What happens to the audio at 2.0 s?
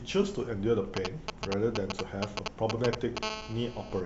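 At 2.0 s three faults overlap. The sharpest is DAB burbling, from 1.99 to 2.08 s. Bit errors that slipped through the receiver's error correction corrupted the MP2 audio data, putting short blips of noise into individual sub-bands. It is a brief burst of blips over the speech. The duration fits a handful of damaged frames at a low error rate, a fraction of a percent. On a spectrogram it shows as isolated rectangular patches in separate frequency bands, each one frame wide, too bright or dropped out. The waveform shows short irregular bumps in the envelope.

Underneath, GSM signalling bursts run from 0.97 to 3.19 s. A nearby 2G phone is transmitting short groups of radio bursts, which the audio circuitry rectifies into a galloping dit-dit-dit of short 217 Hz buzzes, roughly as loud as the speech. A spectrogram shows vertical stripes at the burst rate, with a dense comb of harmonics stacked on 217 Hz. 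In the waveform the speech rides on regularly spaced rectangular pulse trains.

Throughout, including this moment, there is audible MP2 compression, likely from an MP2 encode around 80 kbps. Too few bits per sub-band leave the sound dull, with a gurgling, granular edge. On a spectrogram the top end is cut off unevenly, with high bands flickering on and off in blocks rather than fading smoothly.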